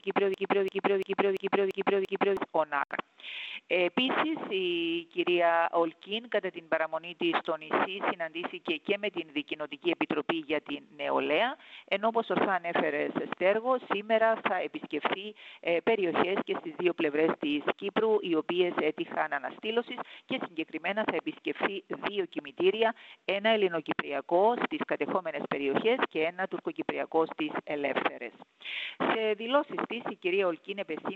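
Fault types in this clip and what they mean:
Broken-record loop: The sound is already looping when the clip begins, with one fragment of 0.34 s repeating exactly, back to back, six times until 2.37 s. The likely cause is a stalled player, encoder or stream resending its last held piece, so the audio meant for that span is lost.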